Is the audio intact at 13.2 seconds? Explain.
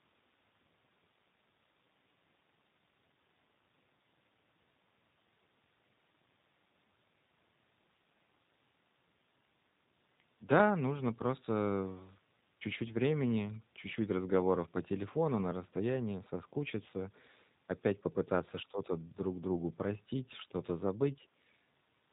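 No. At 13.2 seconds, as across the whole recording, the speech sounds rough and slightly synthetic, with nothing above 4 kHz. This is G.729 codec damage, consistent with roughly 8 kbit/s coding, rebuilding the voice from a vocal tract filter, pitch predictor and sparse pulses.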